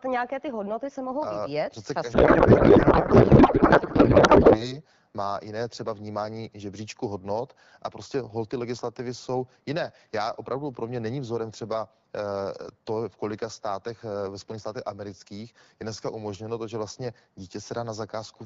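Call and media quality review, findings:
Codec payload misread, 2.13 to 4.76 s. Speech replaced by garbled noise and warble barely tracking the talker. Probable component: AMR-WB depacketiser. The receiver is applying the wrong bit-packing layout, which fits octet-aligned AMR being parsed as bandwidth-efficient, so frame fields land in the wrong positions yet decode as valid. Clears at 4.76 s once packing agrees. Surrounding AMR-WB audio at 12.65 kbit/s shows only light codec damage.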